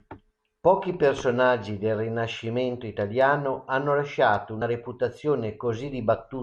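It's a speech clip with one glitch: a brief fault at about 4.61 s, right after "italiano hanno lasciato". That's damaged data in the compressed stream. Bytes in that spot were wrong or missing, so the decoder couldn't make sense of the frames there, lost its sync, and had to hunt for the next valid frame header. You hear that as a quick blip.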